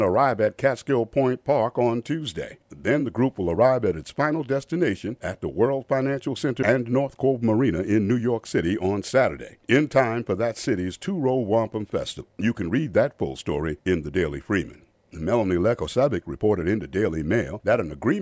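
The audio shows no technical faults at any point, with the signal holding steady and intact throughout.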